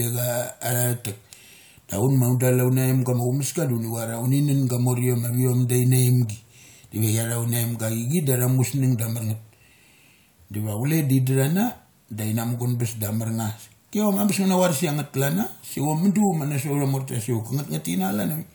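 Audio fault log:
No faults were found in this speech recording.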